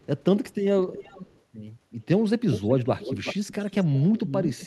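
From 0.0 to 0.05 s, 0.82 to 1.4 s, 1.9 to 2.06 s, 2.52 to 2.74 s, 2.99 to 3.99 s and 4.16 to 4.66 s, an echo leak sends back a copy of the speech about 370 to 390 ms late. It is very faint in the first and third stretches, about 20 dB down at 0.82 s, nearly as loud as the speech at 2.52 s, and about 10 dB down after that. The likely cause is a far-end loudspeaker whose echo canceller passed its microphone pickup. A spectrogram shows harmonic patterns repeated and shifted right, and the waveform shows overlapping, smeared envelopes.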